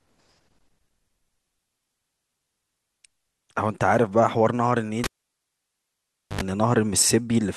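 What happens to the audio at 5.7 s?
At 5.7 s you're right in the middle of a cable being pulled and plugged in, which runs from about 5.04 to 6.41 s. There's a pop as the lead comes out, then about 1.3 s of near silence with the speech gone. On the way back in, the tip touches first and you get a 77 ms burst of 50 Hz mains buzz, then a second pop as the connection seats and the sound returns.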